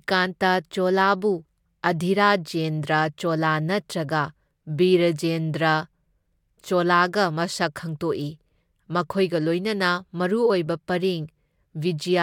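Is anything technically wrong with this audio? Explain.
No, nothing technically wrong can be heard in this speech recording. There is no fault anywhere in it to point to or explain.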